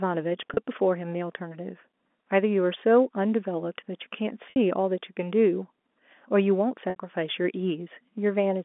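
Speech over a G.711 telephone line, narrowband at roughly 250 Hz to 3.5 kHz with only faint coding hiss, has three dropouts covered by packet loss with pitch repetition. At 0.54 to 0.57 s, about 30 ms goes missing, and the gap is filled by looping the last pitch cycle, so you hear a brief buzzy hold. At 4.50 to 4.56 s and 6.90 to 6.96 s, 60 ms gaps each fit two lost 30 ms packets, and the repeated cycle drones longer and starts fading before the speech cross-fades back in.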